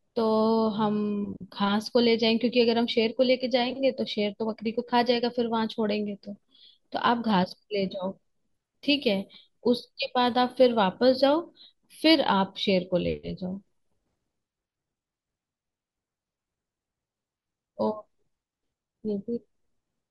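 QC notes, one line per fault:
No faults heard anywhere in this recording.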